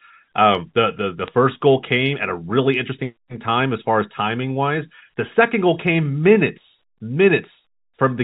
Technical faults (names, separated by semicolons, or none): bit errors on a digital phone line